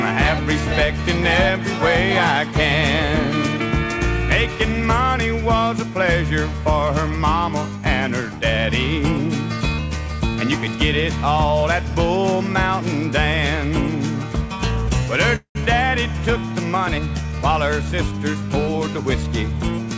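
Audio carried over a call link whose band stops at 8 kHz, which points to G.722 at 64 kbps, shows two faults. A call audio freeze at 15.36–15.57 s was likely caused by delayed packets draining the jitter buffer: the last sound is stretched into a fading buzz or hiss and then about 110 ms of silence, and playback resumes where it stopped. A jitter buffer speed-up from 17.38 to 19.51 s trims the backlog by cutting out tiny pitch-period slices, removing about a fifth of a second so the audio runs 109% fast at unchanged pitch and sounds hurried.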